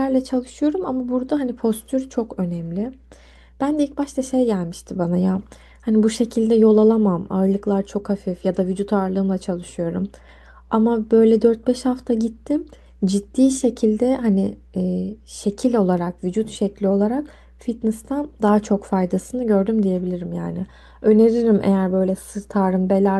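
From start to finish, a mains hum sits under the speech: a steady 60 Hz tone roughly 30 dB below it, where power-line current leaks into the signal through a ground loop or nearby transformer. Unlike wandering low-frequency rumble, it holds one fixed pitch.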